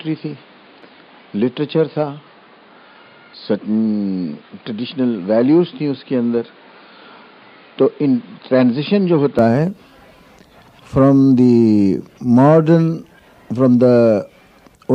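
From the start until 9.39 s the sound is dull and boxy, with nothing above 5 kHz, a level roughly 5 dB lower, and background noise roughly 30 dB below the signal; it brightens abruptly at 9.39 s with no gap. This likely reflects an input switched to a poorer device.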